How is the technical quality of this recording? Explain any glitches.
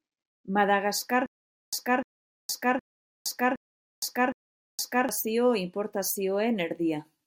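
There's one real problem in this speech: a stutter with silent gaps from 1.26 to 5.09 s. A 300 ms fragment repeats five times, each followed by roughly 466 ms of dead silence. That's likely a stalled stream replaying its last chunk.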